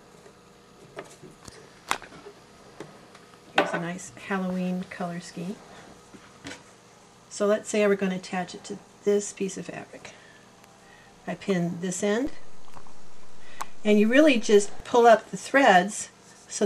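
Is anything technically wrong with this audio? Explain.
Yes. At 12.27 s a low thump is heard, and another at 14.80 s. This is a DC step, where the waveform's zero line jumps by about -28 dBFS and then returns.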